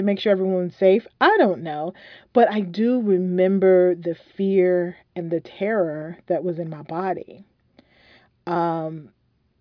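There are no technical faults in this recording to describe in time order.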